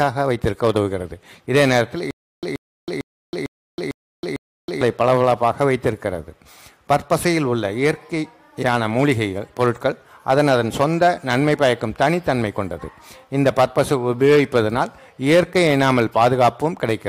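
Stutter with silent gaps runs from 2.11 to 4.81 s. A 130 ms burst repeats six times, between 321 ms silences. The playback likely stalled.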